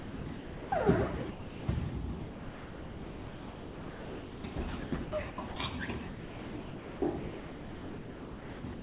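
From 0 to 0.72 s the sound is chopped, likely by the voice detector, with about 620 ms swapped for comfort noise. At 1.3 to 1.68 s the sound is dropped outright, likely because the detector mistook it for background, and 380 ms of comfort noise fills the gap. The chopping likely returns at 2.2 to 4.56 s, 4.84 to 5.56 s and 6.08 to 8.82 s, stuttering between real sound and comfort noise.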